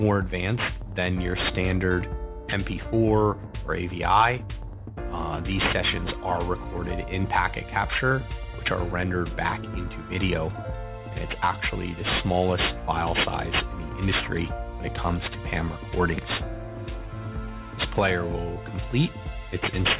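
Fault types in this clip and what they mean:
aliasing: The rate was cut, which fits 8 kHz, without filtering first, so content above 4 kHz folds back below it as gritty, unrelated tones only modestly quieter than the true sound. Unlike plain band-limiting, the highs aren't merely dull but filled with false energy up to 4 kHz.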